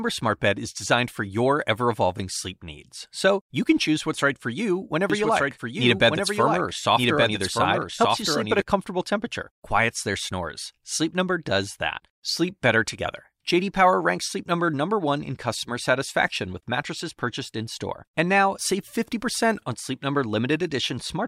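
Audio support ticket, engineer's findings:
Likely a second capture path or an edit holding two copies out of step: doubled audio track, 5.10–8.62 s. Full-band speech copy trails by about a second, roughly 5 dB down, dry with no room colour, starting and stopping abruptly.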